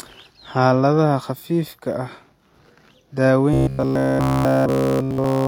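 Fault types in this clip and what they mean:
Robotic sound from repeated short buffers, 3.54 to 5.47 s: the speech becomes a rigid metallic buzz at 66.7 Hz, fitting a 15 ms chunk replayed over and over, likely because fresh audio arrived too seldom, so the real signal is skipped throughout.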